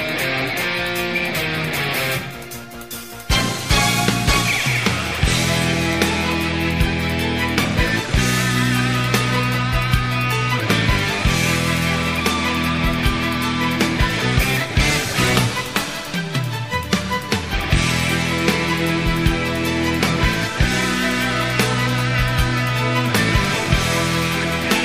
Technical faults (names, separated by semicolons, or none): none